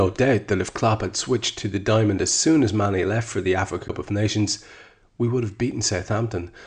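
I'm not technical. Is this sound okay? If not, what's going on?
No. At 3.88 s there is a CD skip: a tick and a very brief silence, after which the speech carries on from a different point. The player's laser lost its track, jumped to another turn of the disc's spiral, and resumed reading there.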